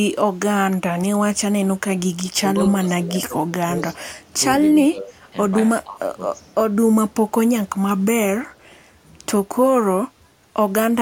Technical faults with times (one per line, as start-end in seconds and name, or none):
0.71-0.76 echo leak
2.35-3.80 speech suppressed in double talk
4.26-4.34 speech suppressed in double talk
4.70-5.29 speech suppressed in double talk
5.84-6.11 speech suppressed in double talk
8.50-8.81 echo leak